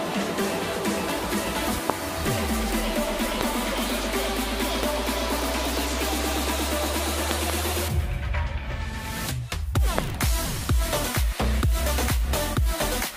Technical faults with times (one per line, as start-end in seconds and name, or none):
1.90-1.92 loud pop
3.41-3.43 loud pop
4.83-4.85 loud pop
7.31-7.52 loud pop
9.98-10.01 loud pop